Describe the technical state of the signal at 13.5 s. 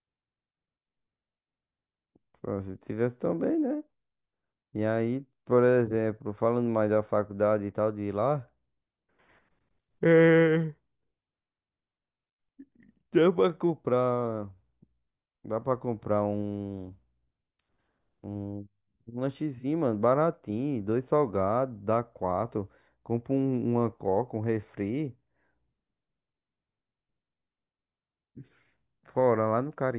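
At 13.5 s the speech signal is intact, with no audible fault at that point.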